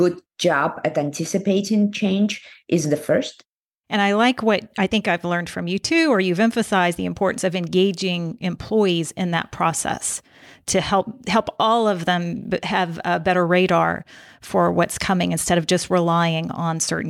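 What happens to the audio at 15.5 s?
At 15.5 s the speech carries sample clock jitter, present throughout: timing wobble of roughly a microsecond and a half adds a faint hiss, about 40 dB down, that grows on loud, bright sounds. A spectrogram shows a diffuse high-frequency haze tracking the speech and vanishing in pauses.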